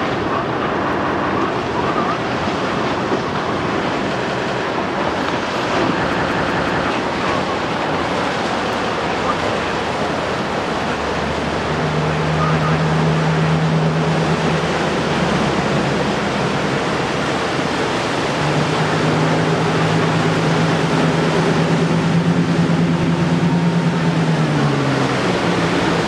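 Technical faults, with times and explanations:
0.93–1.30 s, 4.27–4.64 s, 6.13–6.87 s, 8.73–8.92 s, 12.63–12.82 s and 23.03–23.22 s, repeated buffer: when fresh audio arrived late, the device replayed its last chunk of about 186 ms (which fits an 8192-sample buffer). That chunk plays twice more at the first two points, four times more at 6.13 s and once more at the rest. Each replay meets the next with a hard join, so the sound stutters in blocks about 0.19 s long. The stream then carries on where it left off, with nothing skipped.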